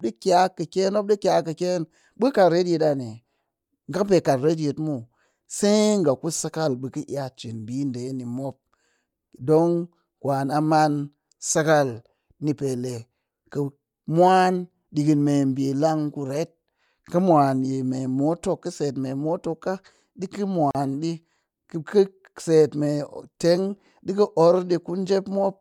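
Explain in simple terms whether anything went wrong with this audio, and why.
At 20.71 s, a 39 ms silence from a gap at a join of encoded pieces: two separately encoded parts were spliced. Unlike a dropout, nothing is lost; speech resumes where it stopped.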